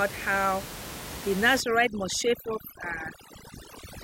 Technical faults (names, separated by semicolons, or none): overdone noise removal